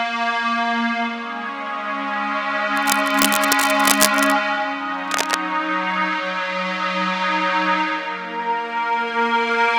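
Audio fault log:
2.76–4.33 s, cable scratch noise: dense, uneven bursts of crackle and rustle sit over the sound, only a little below its level. The irregular texture points to a likely worn cable, connector or control being moved, so its contact resistance jumps rapidly and lets noise into the signal.
5.06–5.35 s, cable scratch noise: a second, shorter burst of the same scratching at a similar level, consistent with the same loose contact being disturbed again.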